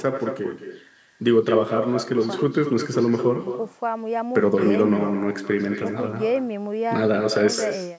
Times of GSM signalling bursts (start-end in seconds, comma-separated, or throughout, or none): none